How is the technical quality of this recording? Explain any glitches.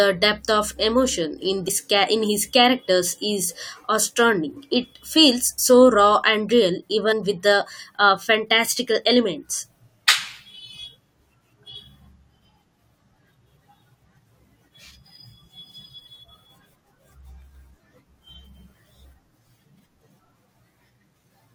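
The speech has three short dropouts, all from compressed frames skipped, at 1.67, 5.58 and 7.11 s. At each, whole frames never reach the output, so the audio jumps ahead by roughly 70, 40 and 100 ms. Each one sounds like a quick jump forward in the speech. In a waveform the envelope changes shape abruptly at that point, and a spectrogram shows a thin vertical seam where harmonic lines break and resume misaligned.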